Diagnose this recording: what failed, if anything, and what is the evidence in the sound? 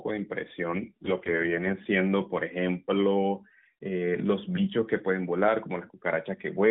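The network forced an AMR rate drop on the speech codec from about 0.68 to 1.87 s. The band stays at the narrowband 4 kHz ceiling with no gap, but the speech turns rougher and more synthetic, which fits a step down from 12.2 to 4.75 kbps.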